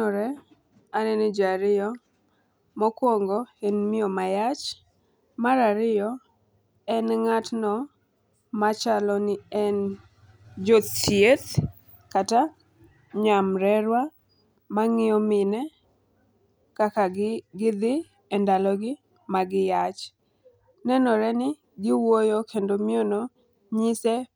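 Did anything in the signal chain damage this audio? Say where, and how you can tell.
No, nothing in the chain did.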